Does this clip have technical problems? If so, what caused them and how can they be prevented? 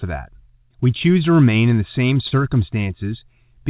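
Yes. Just after "remain in the same", at 2.28 to 2.33 s, a sound hangs with a faint buzz or dip. This is a short stall from a late packet: the empty jitter buffer stretched the audio for 30 ms and lost nothing. A slightly deeper jitter buffer would absorb a 30 ms delay jump like this one.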